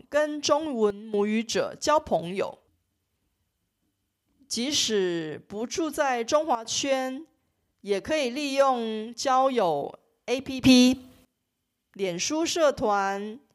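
Sudden gain jumps drop speech and noise together about 12 dB at 0.90–1.14 and 6.55–6.65 s, then raise them about 18 dB at 10.64–11.25 s, likely unramped gain steps.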